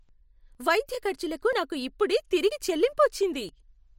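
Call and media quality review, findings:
Brief skips in the speech at 0.55 s (just before "వైద్య ఖర్చులకు నాకు ఇప్పుడే"), 1.53 s (between "వైద్య ఖర్చులకు" and "నాకు ఇప్పుడే"), 2.51 s and 3.49 s, each losing roughly 20 ms. Audio missing between chunks, likely from a recorder or processor working in 1 s blocks and dropping a sliver at each handover.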